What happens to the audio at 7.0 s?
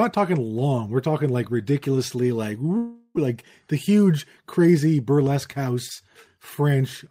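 Nothing goes wrong at 7.0 s; the audio there, close to the end of the speech, plays through intact with no dropout, click or distortion.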